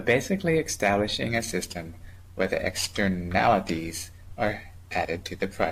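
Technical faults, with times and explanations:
1.30–5.72 s: periodic clock jitter, shaking the converter's clock at around 2 kHz, gives the speech a metallic roughness. The spectrogram shows sidebands flanking each component, strongest up high, and they vanish in pauses.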